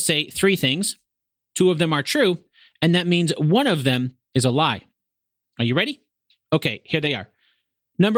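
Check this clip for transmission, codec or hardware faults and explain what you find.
Two short bursts of lost packets rebuilt from error correction are audible. At 4.09–4.11 s, after "that means one of" and before "is a lie", and at 7.01–7.07 s, a low-bitrate backup copy fills each gap. There is no silence, just briefly rougher, noisier audio. The second patch lasts about 40 ms, which fits two lost packets.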